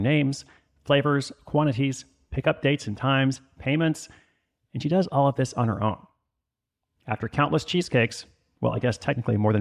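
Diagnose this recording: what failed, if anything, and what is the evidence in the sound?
Nothing stood out on listening through this speech recording.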